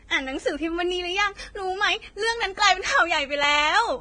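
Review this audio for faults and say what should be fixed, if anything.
The speech has no content above 9.7 kHz, and two different codec textures are heard together. This is likely transcoding between lossy codecs, with Vorbis then WMA. Prevent it by encoding once from the original source.

Regular clicks occur about once a second from 0.43 to 3.43 s, roughly four in all. These are likely clock drift buffer slips. Two clocks disagree by a few hundred ppm, so small blocks of samples are dropped or repeated. Prevent this by locking both devices to one clock or by resampling asynchronously.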